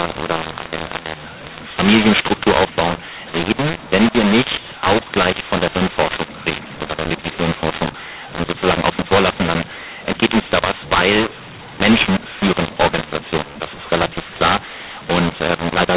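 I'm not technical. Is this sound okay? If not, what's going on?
No. The speech has a mu-law and A-law mix-up throughout: it was written in the telephone mu-law format but read back as A-law, so loudness steps get scrambled. Unlike ordinary clipping, even the quiet pauses turn harsh and noisy, not just the loud peaks.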